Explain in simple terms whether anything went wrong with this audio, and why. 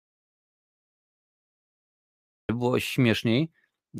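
Yes: an audio dropout to silence runs from the start to 2.49 s, dead silence without room tone, unlike a natural pause, likely from lost input.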